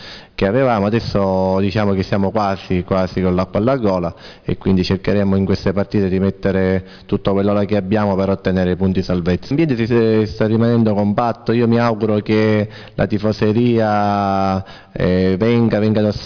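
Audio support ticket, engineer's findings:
No faults found on listening. No working path is noted beyond the playback itself, so nothing further to report.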